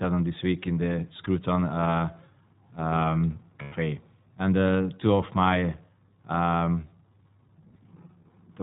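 Throughout, the speech passes through the iLBC codec, which codes each 20 ms frame's excitation independently and discards everything above 4 kHz. The plainly audible damage is a dull, band-limited tone with a rough, slightly synthetic edge, consistent with the 15.2 kbps mode. From 3.62 to 3.74 s, lost iLBC frames leave a gap of about 100 ms, which points to five 20 ms frames. The decoder fills it by repeating the last pitch cycle mixed with noise, so the sound briefly turns into a held, buzzy vowel before the voice returns almost at once.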